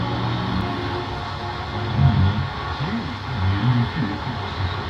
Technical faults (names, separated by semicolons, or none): CD skip